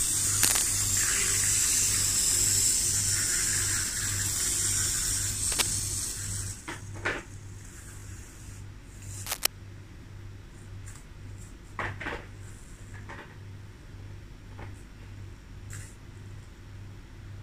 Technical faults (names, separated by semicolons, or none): cable scratch noise; overlapping chunks